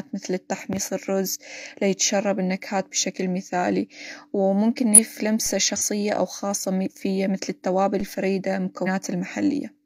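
At 4.93 to 4.99 s the speech jumps ahead by roughly a fifth of a second: compressed frames skipped, lost or rejected by the decoder. On a spectrogram the harmonic traces break and resume misaligned.

A DC step follows at 5.46 s, a low thump as the waveform's zero line suddenly shifts, then drifts back over a fraction of a second, like a 5 Hz high-pass settling. The spectrogram shows a smudge at the very bottom.

Further frame skips cut out about a tenth of a second at 5.76 to 5.82 s and around 150 ms at 8.83 to 8.88 s, with a second DC step thumping at 8.01 s.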